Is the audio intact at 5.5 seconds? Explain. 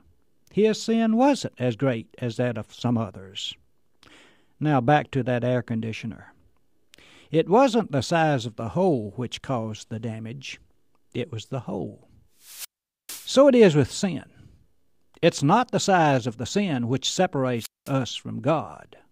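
Yes, the speech runs intact through 5.5 seconds, with no dropout, glitch or other fault at that point.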